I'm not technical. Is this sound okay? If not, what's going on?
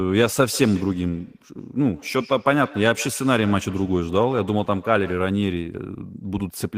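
No. From about 0.48 to 5.35 seconds the speech has a faint repeat trailing behind it, coming back about every 0.15 seconds and sounding thin and ringing. This is feedback echo between two devices: two devices in the same room are on one call, and one plays out what the other's microphone sent. That microphone hears it again and sends it back, and each device's echo remover only cleans up its own playback, so the repeat gets through.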